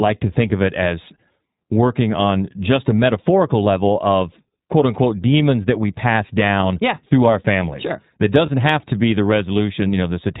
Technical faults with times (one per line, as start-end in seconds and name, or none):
0.00-10.40 iLBC codec
8.46-8.49 lost iLBC frames